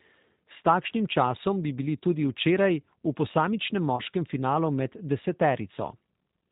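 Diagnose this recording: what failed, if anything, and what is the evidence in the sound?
Rough, synthetic speech with nothing above 4 kHz throughout: G.729 codec damage at the codec stage, where the voice is rebuilt from filter, pitch and pulse parameters, which fits an 8 kbit/s stream.

From 3.96 to 4.02 s, a brief, fading smear: VoIP packet loss concealed by the speech codec. About 20 ms went missing, pointing to a single lost packet on the network that the decoder extrapolated over, with weakened speech lingering afterward.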